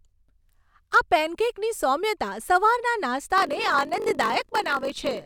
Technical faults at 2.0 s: none

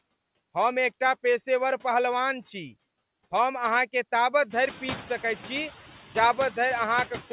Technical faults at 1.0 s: noise suppressor artifacts

